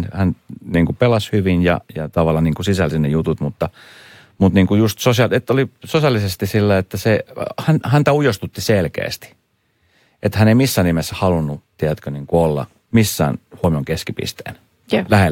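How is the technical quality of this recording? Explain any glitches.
The recording has one glitch, at 13.64 s, right after "tiedätkö niin olla missään". This is likely a dropped buffer (overrun): the software failed to read a block of samples before the hardware overwrote it, losing roughly 30 ms. The two sides butt together with no gap, producing a small forward jump in the speech.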